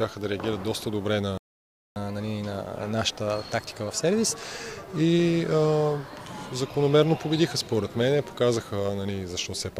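At 1.38 s a playback stall, likely from the player running short of data or its thread being blocked, cuts the sound to silence for about 0.58 s until 1.96 s. From 1.96 s to 4.96 s, catch-up at higher speed resamples the backlog at 1.1 times normal rate, so the sound runs faster and roughly one and a half semitones sharp before settling back.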